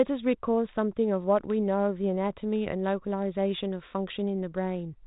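Listening to this speech clip, nothing stood out as a technical problem, and the narrow telephone-style band that comes from its G.726 ADPCM coding at 32 kbit/s, with nothing above about 3.8 kHz, is just what that path normally sounds like.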